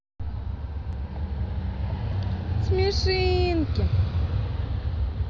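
A dropped buffer (overrun) is heard at 0.93 s and again at 2.94 s: each time the speech jumps forward, as roughly 30 ms of audio goes missing and the surrounding pieces butt together, likely because samples were not read before the hardware overwrote them.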